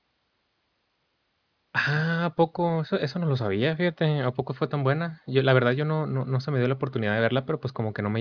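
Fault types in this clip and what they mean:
There are no fault types in this clip.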